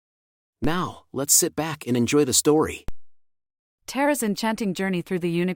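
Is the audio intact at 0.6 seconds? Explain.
No. At 0.64 s, just before "let's sit back and", a single low thump cuts in under the speech, which itself carries on unchanged. This is a DC step: the waveform's zero line suddenly jumps by about -19 dBFS, as when a converter recalibrates or an offset input is switched in. That abrupt shift produces the thump, and the offset then drains away slowly, at the pace of a 2 Hz high-pass.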